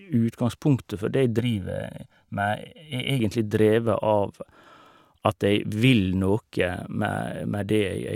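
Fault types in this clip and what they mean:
Channel delay (comb filtering): From 1.39 to 3.20 s, one channel of the speech arrives late by roughly 1.5 ms and is summed with the other to mono. Content shared by both channels cancels at a series of evenly spaced frequencies, with the first notch near 400 Hz and further notches repeating above it. The result is a hollow, phasey coloration with fixed spectral gaps for that stretch.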